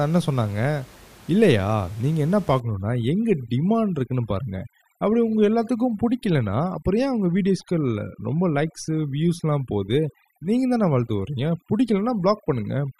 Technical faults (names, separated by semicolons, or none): overdone noise removal